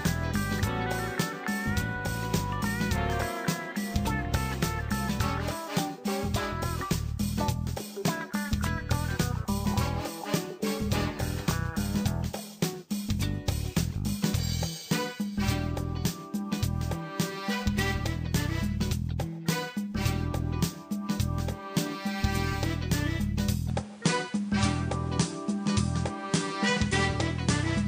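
The input was likely switched to a poorer device at 23.70 s, and the new path holds to the end. From there nothing comes through above 11.4 kHz, the tone changes with no gap at the switch, the level stays about the same, and fresh background noise sits roughly 30 dB below the sound.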